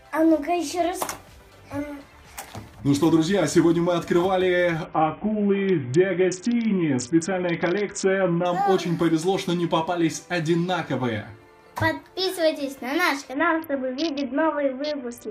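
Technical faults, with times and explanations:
4.85–8.45 s and 13.33 s to the end: Bluetooth SBC bit pool drop. Treble dulls and a gritty grain rises as a congested link starves the top sub-bands and coarsens the rest, which fits a bit pool cut from 31 to about 6 (roughly 55 kbps). Unlike a simple low-pass, the grit accompanies the dulling. The first dip recovers; the second lasts to the end.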